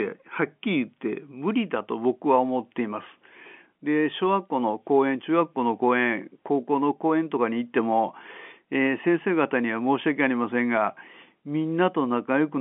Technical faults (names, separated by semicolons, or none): none